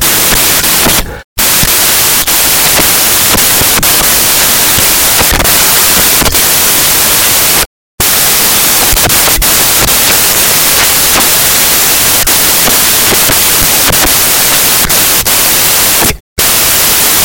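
From start to end, samples built from the wrong bytes turn the speech into loud, harsh broadband noise. Misordered bytes make low bits dominate.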